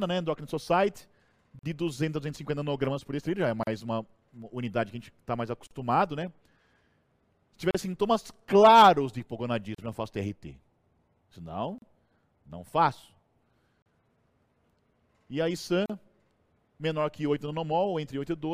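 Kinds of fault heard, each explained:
Gap at a join of encoded pieces: separately encoded segments were joined with each run's start delay and last-frame padding left in. A silence of 38 to 43 ms, its edges smeared, interrupts the sound every 2 s, which then resumes where it stopped.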